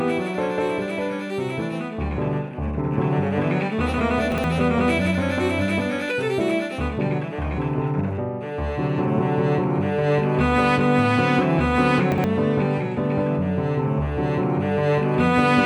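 From 4.32 to 4.44 s, chunks out of order: a 60 ms chunk plays one chunk late, after the one that should follow it. The sound briefly jumbles, with three hard joins, seen on a waveform or spectrogram as abrupt vertical discontinuities around a swapped segment.

At 12.00 s the audio skips ahead a few milliseconds, likely a dropped buffer (overrun), where samples were overwritten before being read. No gap appears, just a sudden step in the waveform. At 12.12 to 12.24 s the same 60 ms chunks-out-of-order swap recurs.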